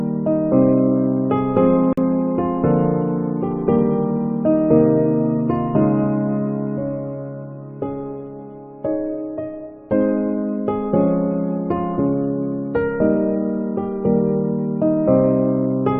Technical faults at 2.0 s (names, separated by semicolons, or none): gap at a join of encoded pieces